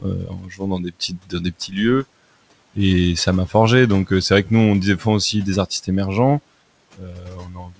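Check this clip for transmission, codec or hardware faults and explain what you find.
One fault appears, twice: the noise suppressor cuts into the speech at the start and at the end of the clip.

Speech cut by the noise suppressor, from 0.00 to 1.78 s and from 6.97 s to the end. The suppressor treats parts of the speech as background and pulls them down along with the room noise, which sits about 23 dB below the speech. Within the opening stretch, about one and a half seconds are affected, with drops of up to about 19 dB. The closing stretch drops by up to about 18 dB. Soft consonants and word endings come out swallowed or faint.

The lack of any content above 8 kHz fits a G.722 wideband call codec running at about 64 kbps.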